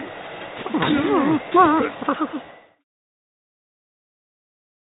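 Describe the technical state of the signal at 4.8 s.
At 4.8 s the audio is intact, with nothing wrong in the signal at that moment.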